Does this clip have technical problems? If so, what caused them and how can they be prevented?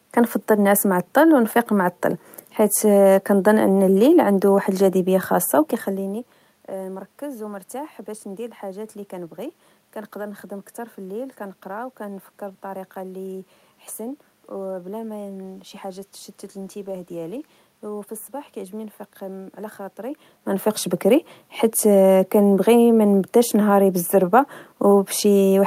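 No, nothing in the recording chain is misbehaving here: the steady room noise belongs to the space itself, and the level shifts around 5.5 and 20 seconds are just the talker moving relative to the microphone, so there is nothing to fix or prevent.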